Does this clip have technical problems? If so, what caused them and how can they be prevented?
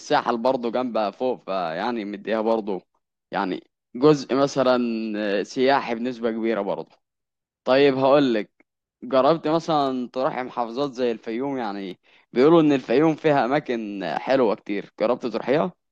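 No, there are no technical faults to point to in this speech clip. Nothing in the recording calls for a cause or a preventive step.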